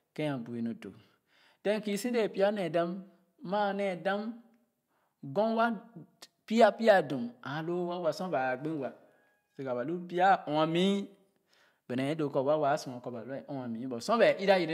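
Speech recording, with nothing technically wrong to report.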